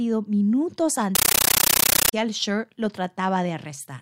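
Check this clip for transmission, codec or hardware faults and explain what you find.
One fault is present: a compressed stream played as audio, from 1.15 s to 2.13 s. A Dolby Digital (AC-3) bitstream, likely from a high-rate 640 kbps source, was passed as PCM samples without decoding. Each frame becomes a 13.3 ms noise burst then silence, repeating at 31.25 Hz, producing loud, chattering static in place of the speech.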